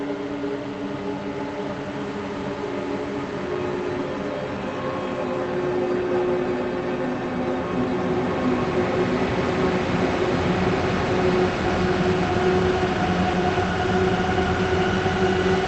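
Nothing here sounds like a technical fault.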